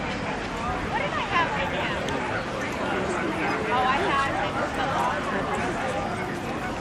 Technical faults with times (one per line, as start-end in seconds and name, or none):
none